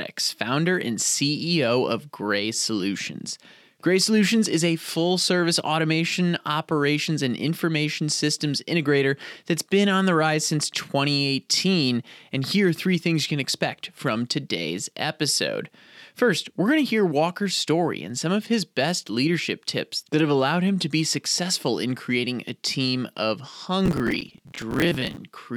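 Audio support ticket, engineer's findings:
Processor overload crackle, 23.86–25.17 s, right after "creating a team of". Gritty tearing over the speech. Probable component: host CPU missing audio deadlines. Around fifty buffers of roughly 10 ms overrun, each replaying stale audio with hard edges.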